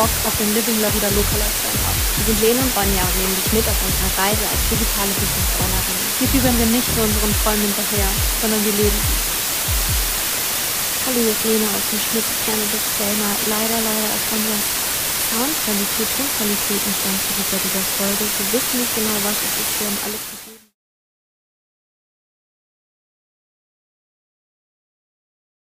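From start to finish, the audio carries low bit depth with dither. Only 3 bits describe each sample. Noise was added before the rounding, so the error turns into a steady white hiss rather than harsh distortion. That hiss is about as loud as the sound itself, roughly level with it. It stays even and constant throughout. A smooth fade-out begins around 19.5 s and ends at 20.76 s.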